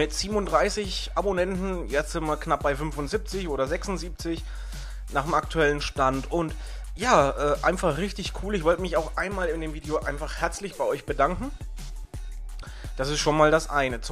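No technical faults can be heard anywhere in the sound.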